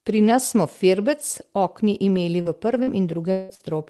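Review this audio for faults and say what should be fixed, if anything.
Short concealed packet loss at 2.41–2.48 s, 2.83–2.90 s and 3.55–3.62 s: about 40 ms of audio never arrived each time, and the receiver bridged each hole by extending the preceding sound, leaving a brief smear. Preventing it means a larger jitter buffer or a steadier network link.

Lost packet rebuilt from error correction at 2.45–2.47 s, 2.87–2.89 s and 3.59–3.61 s: a 20 ms frame inside each of those gaps was restored from a low-bitrate backup copy, so it sounds rougher and noisier. Preventing it means reducing packet loss on the link, though the error correction already softens the damage.

Long network dropout at 3.31–3.52 s: for about 180 ms the audio turns into a fading buzz or hiss continuing the last sound with no silence, likely because nothing arrived for that stretch. Preventing it means fixing the connection stability, for example by moving off congested Wi-Fi or giving call traffic priority.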